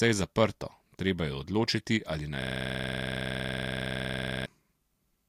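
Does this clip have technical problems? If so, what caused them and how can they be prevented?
Yes. From 2.42 s to 4.46 s the speech freezes into a system hang loop: one 46.4 ms slice of audio repeats exactly, about 44 times, producing a rasping stutter at 21.5 Hz. The host or driver stopped supplying new samples while the audio hardware kept replaying its ring buffer, and the loop length fits a 2048-sample buffer. Prevent it by running the audio thread at real-time priority and having the driver mute output on underrun instead of recycling stale data.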